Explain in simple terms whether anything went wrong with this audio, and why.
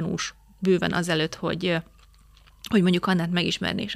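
Nothing went wrong; no faults can be heard.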